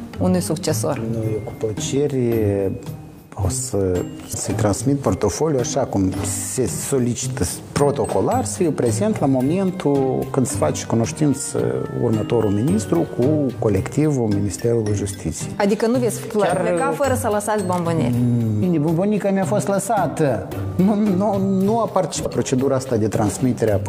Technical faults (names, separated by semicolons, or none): damaged data in a compressed stream